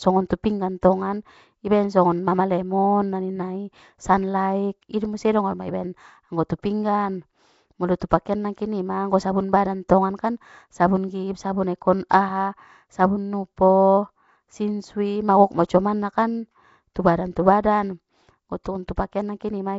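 Speech running the full clip with Nellymoser compression damage: a rough, hissy halo and a smeared, underwater quality, likely from the old Flash microphone codec near 32 kbps. On a spectrogram, content stops sharply around 7.7 kHz, and weaker bands appear as blotchy noise fill.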